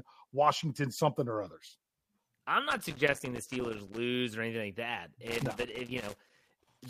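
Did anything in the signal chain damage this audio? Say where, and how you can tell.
Yes, in the analogue wiring: there's loose connector crackle from 2.71 to 3.97 s, just before "or anything", and again from 5.27 s to the end at 6.89 s. Those ragged, irregular scratchy bursts are a worn contact making and breaking as it shifts, chopping the signal.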